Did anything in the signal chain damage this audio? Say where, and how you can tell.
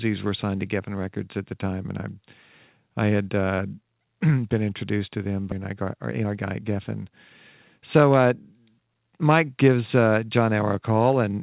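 Yes. At 5.52 to 5.54 s the network and jitter buffer stage produced a skip ahead. Playback jumps forward with no filler, and about a second of audio is gone. The two sides are spliced almost directly after audio was dropped in transit or by an overflowing buffer while later audio was already queued.

Jitter buffer speed-up follows in two runs. From 5.65 to 7.07 s the sound runs about 14% fast, and from 7.78 to 8.69 s about 9% fast, with pitch unchanged. The receiver trimmed short pitch-period slices to drain its excess delay, roughly a fifth and a tenth of a second respectively. The band stops at 4 kHz throughout, which fits a 64 kbps G.711 A-law call path.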